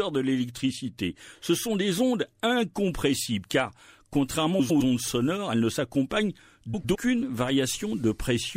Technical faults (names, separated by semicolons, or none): frames out of order